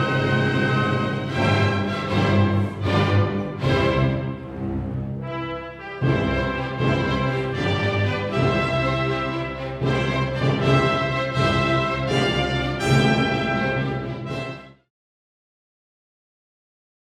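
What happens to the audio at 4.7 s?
Nothing goes wrong at 4.7 s; the audio runs through that moment intact, with no dropout, click or change in level.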